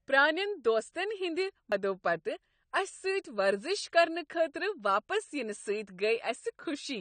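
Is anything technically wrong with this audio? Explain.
Yes. Throughout, the speech sounds dull and smeared, with nothing above 9 kHz and a warbly texture, likely from AAC compression at a low bitrate around 32 kbps discarding spectral detail.

At 1.71 s, just after "پرٲنین دوستن ہند", a CD skip occurs: the laser jumps tracks, giving a tick, a very brief mute, then playback resuming elsewhere.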